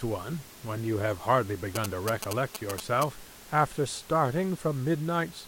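From 1.75 s to 3.04 s the speech is overlaid with GSM signalling bursts: a nearby 2G phone exchanging short groups of radio bursts, which the audio circuitry rectifies into a galloping run of brief buzzes repeating at about 217 Hz, only slightly quieter than the speech and well above the faint room noise. On a spectrogram these form clustered vertical stripes with a comb of 217 Hz harmonics; the waveform shows spiky, square-edged bursts.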